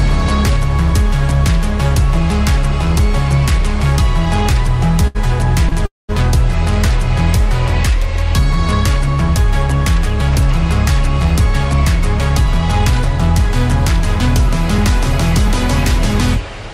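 At 5.07 s and again at 5.69 s there is a short stall from a late packet. The receiver's jitter buffer ran dry, so the last sound was held for about 73 ms, then about 29 ms. It comes across as a brief smear with a faint buzz. Nothing is lost.

From 5.86 to 6.11 s a call audio freeze follows. The audio stops for 230 ms, most of it silent for about 180 ms. The likely cause is packets delayed in transit, leaving the buffer empty. Playback then resumes where it stopped.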